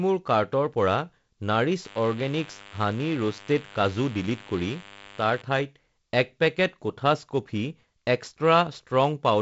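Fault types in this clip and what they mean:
DECT cordless phone buzz, 1.85 to 5.42 s: a thin, steady buzz sits beneath the speech, roughly 20 dB below it. A DECT handset or base nearby transmits a short radio burst every 10 ms, and the audio circuitry rectifies those bursts into sound. The result is a tone repeating at 100 Hz with a dense stack of harmonics.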